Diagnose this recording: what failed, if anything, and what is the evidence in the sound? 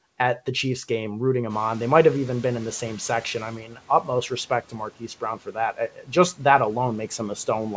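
The call-processing stage's noise suppressor was caught out by a sudden jump in the room noise, about 15 dB near 1.5 s, and its noise estimate lagged behind. From 1.49 s to 3.56 s the background comes through with too little reduction, audibly louder. Then over roughly 2.07 s it sinks by about 9 dB as the estimate climbs to the new level. The result is noise suppressor catching up: a slow fade of the background noise rather than a clean step.

Later, the same suppressor misjudged low-level speech energy as noise and pulled it down with the background. That is speech cut by the noise suppressor, at 3.6 to 4.08 s (deepest drop about 11 dB, roughly 0.3 s affected in total) and at 5.73 to 6.1 s (about 12 dB, around 0.2 s). Soft consonants and word tails there sound swallowed and faint. The band stops at 8 kHz throughout, which fits a G.722 wideband call path.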